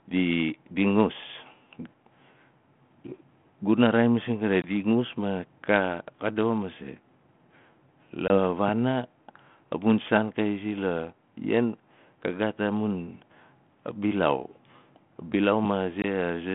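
Speech carried over a G.726 ADPCM line at 32 kbit/s, limited to about 150 Hz to 3.4 kHz, shows packet loss on an ADPCM call at 4.62 s (just before "ngus ma"), 8.28 s and 16.02 s. Each is a hard-edged 20 ms silent hole, fitting one lost packet. Unlike a plain dropout, the audio then returns slightly distorted, because the decoder's adaptive predictor and step size must resynchronise.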